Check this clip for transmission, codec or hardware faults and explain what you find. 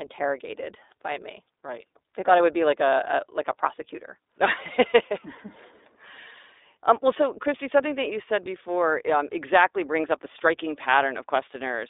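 The speech carries one fault, present for the whole clip: iLBC codec coding. Everything sits within roughly 300 Hz to 3.7 kHz, and the voice has a plainly rough, synthetic grain. Each short frame is coded independently, consistent with 20 ms frames at iLBC's 15.2 kbps mode. A simple band-limited line would sound narrow but smooth; here, the buzzy excitation texture marks a codec.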